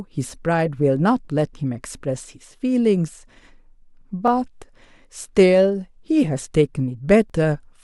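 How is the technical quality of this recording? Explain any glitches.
Overlapping chunks, where each new block of audio is started slightly before the previous block finished, disrupts this speech recording three times, at 1.25 s, 4.28 s and 7.30 s. The blocks are 3.0 s long, and each join replays about 21 ms of sound, which is heard as a brief stutter or click recurring at that regular three-second spacing.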